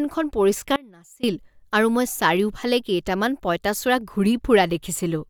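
Speech with an audio dropout to a faint residue from 0.76 to 1.23 s. The sound cuts abruptly to a faint residue about 25 dB down, recovering at "আৰু মই চাৰিওফালে কেইটামান". This is likely a brief upstream break while the downstream path stayed live.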